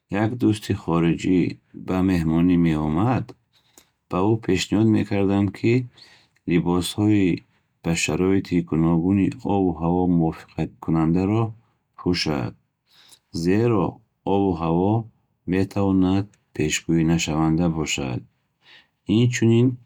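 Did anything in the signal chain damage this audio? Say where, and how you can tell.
No, nothing in the chain audibly damaged this speech recording at any stage.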